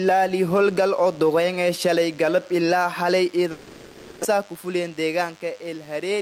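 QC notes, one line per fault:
Throughout: DECT cordless phone buzz. A thin, steady buzz sits about 30 dB below the sound, repeating at 100 Hz with a dense stack of harmonics. A nearby DECT handset or base fires a radio burst every 10 ms, and the audio circuitry rectifies it into this tone.
3.51 to 4.25 s: long network dropout. For about 0.74 s the audio is replaced by a continuation of the last sound that fades, never reaching silence. This likely comes from audio failing to arrive, with roughly 600 ms lost; playback resumes later without that part.
4.33 to 5.44 s: jitter buffer speed-up. Right after the gap the sound runs about 9% fast at unchanged pitch, feeling hurried. The buffer had filled past its target, so the receiver repeatedly cut out pitch-period-sized slices, around a tenth of a second in total, to reduce delay.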